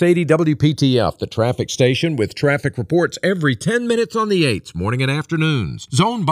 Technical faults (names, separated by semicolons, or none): channels drifting apart